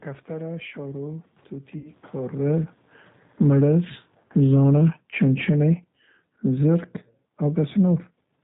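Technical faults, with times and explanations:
Throughout: G.729 codec. The 8 kbit/s coder rebuilds speech from a filter, pitch predictor and a few pulses, so nothing passes above 4 kHz and the speech sounds rough and synthetic.
1.78 to 1.90 s: VoIP packet loss concealed by the speech codec. About 60 ms of audio went missing, which fits three packets. The decoder stretched its last frame into a fading buzzy tone or coloured noise, and the speech stays weak briefly afterwards.
3.26 to 8.27 s: automatic gain falling. The gain control judged the input too loud, or its background noise too strong, and lowered its gain by about 10 dB, so speech and background sink together gradually.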